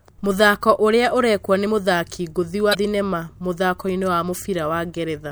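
At 2.71 to 2.75 s the speech hits damaged data in a compressed stream. Corrupt frames throw the decoder out of sync, giving a brief glitch.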